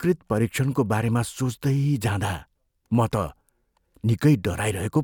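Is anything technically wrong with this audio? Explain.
No, nothing technically wrong stood out when listening to this speech recording.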